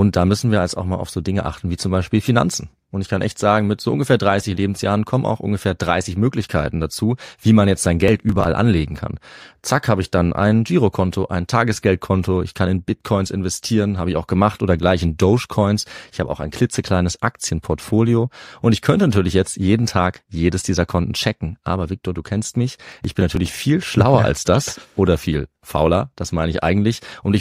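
A speech recording twice hits processor overload crackle: the processor falls behind and misses a run of short buffer deadlines, around ten over a short stretch, with gaps that fit buffers of about 5 ms. Each missed buffer is skipped outright, so the speech jumps forward with hard-edged splices. From 8.08 to 8.45 s and again from 22.92 to 23.48 s this produces a gritty burst of crackle over the speech that clears once the load eases.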